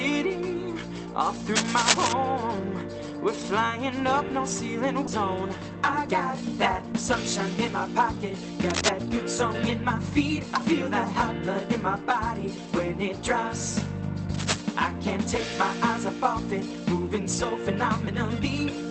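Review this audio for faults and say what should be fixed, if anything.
Scratchy, rustling bursts at 1.55–2.13 s, 8.7–8.9 s and 14.34–14.62 s, roughly as loud as the sound or louder: cable scratch noise, likely from a worn cable or connector whose contact resistance flickers. Replacing or reseating that cable and cleaning the connectors should prevent it.

At 5.07 s the audio jumps forward with no gap, losing about a second: a skip ahead, where audio was dropped while later audio was already waiting. Steadier network delivery, or a buffer that shortens gradually instead of dropping whole chunks, would prevent this.

From 5.39 s to 6.94 s the audio runs 7% fast at unchanged pitch: jitter buffer speed-up, trimming about a tenth of a second in small pieces to cut buffered delay. Reducing the packet bunching that overfills the buffer would avoid it.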